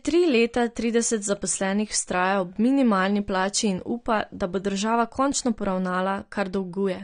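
From start to end the speech sounds dull and smeared, with nothing above about 9.7 kHz and a fizzy, warbling texture on sibilants, which is plainly audible. The likely cause is AAC compression, the AAC-LC kind, at a bitrate that fits around 32 kbps.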